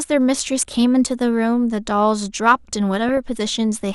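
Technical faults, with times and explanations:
Throughout: MP2 compression, likely at around 80 kbps. The speech sounds dull and gurgly as upper sub-bands drop out and what's left gets coarsely quantised.
0.38–0.74 s and 3.09–3.17 s: DAB burbling. Bit errors slip past error correction into the audio data, so wrong samples put short blips of noise into single sub-bands.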